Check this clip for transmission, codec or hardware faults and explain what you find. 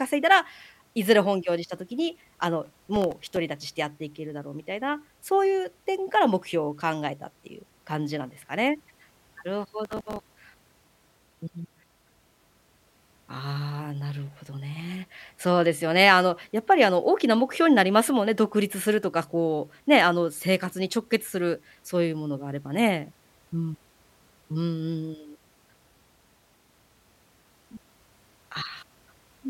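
Processor overload crackle appears twice, from 2.66 to 3.36 s and from 9.85 to 10.20 s. The processor misses many short buffer deadlines in a row, replaying stale audio with hard edges. The result is a gritty crackle over the speech, fitting buffers of a few milliseconds.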